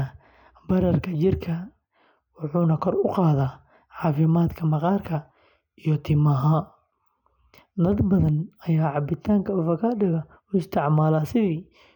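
No technical faults can be heard anywhere in this speech recording. Nothing in the audio points to a problem in how it was captured, processed or played back.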